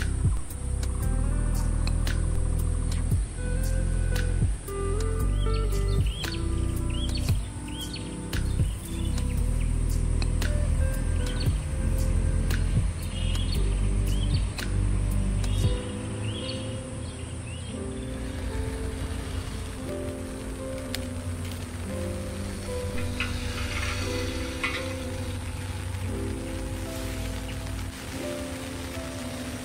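At 0.37 s and again at 2.36 s the waveform's zero line jumps abruptly, a DC step of about -24 dBFS each time. The offset then eases back toward centre, as a 2 Hz high-pass would pull it, over roughly a tenth of a second. Each step is heard as a low thump while the sound continues unaltered. On a waveform the baseline visibly shifts and sags back; a spectrogram shows a brief vertical smear concentrated at the lowest frequencies.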